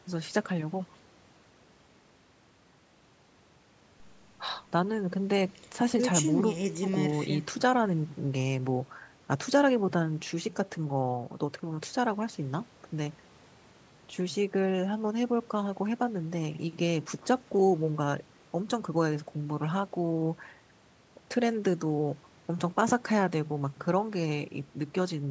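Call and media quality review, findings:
Nothing stood out on listening to this speech recording, which carries the usual call microphone processing with its low bass trimmed and no content above 8 kHz.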